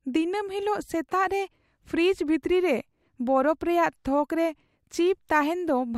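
No technical faults can be heard anywhere in the recording; the speech signal stays continuous and stable throughout.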